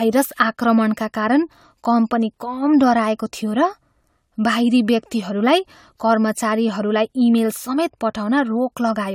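Generation loss runs through the whole speech clip: swirly, smeared, hollow sound with blurred attacks and nothing above 19.3 kHz. The likely cause is around five passes through a codec resembling AAC-LC at 96 kbit/s, each re-quantising on a shifted frame grid.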